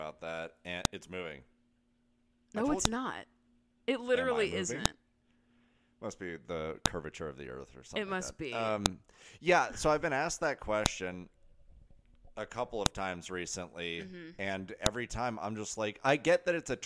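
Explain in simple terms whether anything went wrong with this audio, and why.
Something did go wrong. There's a click or snap every two seconds, at 0.85, 2.85, 4.86, 6.86, 8.86, 10.86, 12.86 and 14.86 s. The first lands between "that and" and "it's moving", and the last sits just before "time I'm just". That's a file header played as audio: the recording was stitched together from two-second WAV pieces, and each piece's header bytes got played as sound instead of being stripped out.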